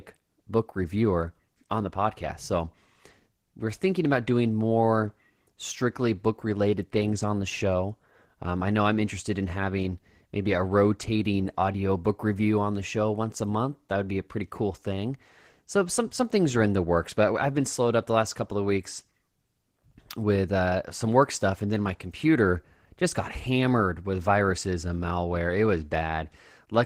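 Throughout the speech, Opus voice compression is plainly audible, with a slightly hoarse, robotic quality that fits roughly 16 kbps hybrid coding. A spectrogram would show smeared harmonics below 8 kHz and patchy, blocky energy above it.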